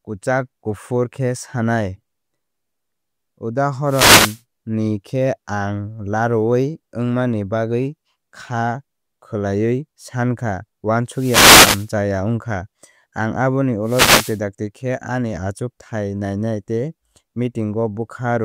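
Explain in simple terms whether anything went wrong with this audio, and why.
Three short bursts of hiss break into the speech, from 3.85 to 4.42 s, 11.11 to 11.93 s and 13.83 to 14.40 s. Each is a wireless microphone noise hit: the radio signal briefly faded as reflections cancelled, letting receiver static rise under the voice.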